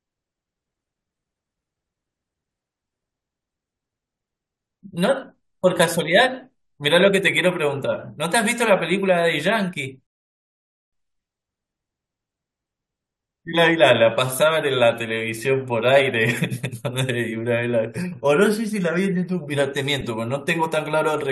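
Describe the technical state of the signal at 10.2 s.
At 10.2 s the speech sits inside a rebuffering stall, silent from 10.07 to 10.93 s while the player waits for data. Unlike a dropout, it resumes exactly where it stopped, losing nothing but adding about 0.86 s.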